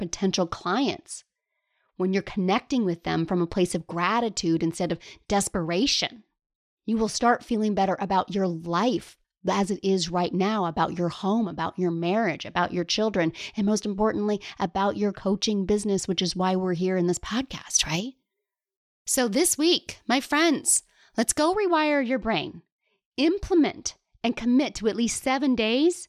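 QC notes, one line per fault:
17.26–21.54 s, pre-emphasis left on: a 75 µs FM treble boost was never undone, lifting 10 kHz about 13 dB, so the speech turns thin, bright and hissy.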